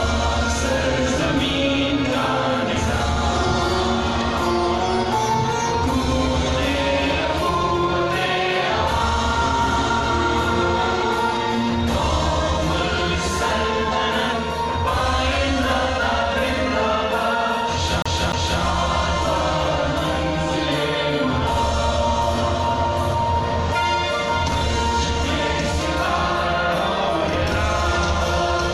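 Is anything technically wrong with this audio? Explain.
Yes. From 18.02 to 18.62 s the disc is stuck on one turn: a scratch bounces the laser back a track, replaying a 0.30 s loop twice with muted jumps.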